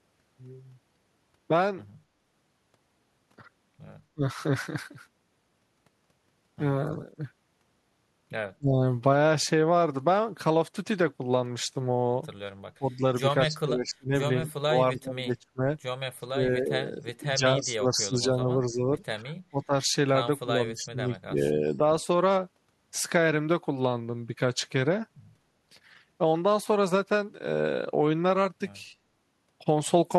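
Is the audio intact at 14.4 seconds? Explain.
No, this is speech suppressed in double talk: from 12.78 to 19.73 s an echo canceller likely mistook overlapping talk for echo, pulling the speech down by up to roughly 30 dB in pieces.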